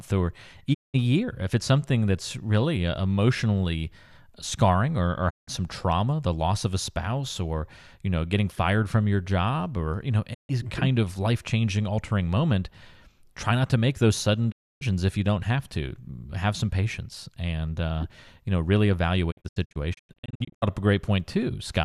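The speech suffers a digital broadcast dropout five times. Each time the receiver stops getting usable frames and mutes, fading out over about 20 ms until good data returns. Gaps fall at 0.73 s (192 ms lost), 5.29 s (168 ms), 10.33 s (144 ms) and 14.50 s (288 ms). The last, from 19.30 to 20.64 s, breaks into many short holes. None is longer than 96 ms, but 624 ms is lost in all. Whatever was sent during those holes is gone.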